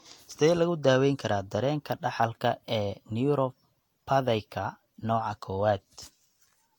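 Generation loss runs through the whole speech clip, from start to end. The sound is swirly and hollow, with smeared consonant attacks and nothing above 19.4 kHz. That is more damage than a single pass at around 70 kbit/s would leave, so the likely cause is roughly three successive Vorbis encodes, each requantising on a shifted frame grid so the noise and spectral holes build up.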